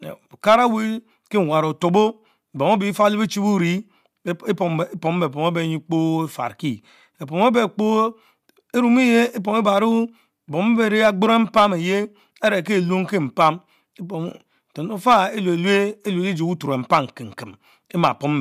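No technical faults are audible.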